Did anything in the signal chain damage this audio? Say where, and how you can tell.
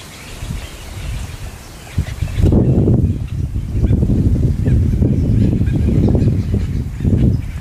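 Yes, Wi-Fi interference in the analogue wiring throughout. The rectified radio beacon ticks every 102.4 ms, about 40 dB down, showing as evenly spaced vertical spectrogram lines.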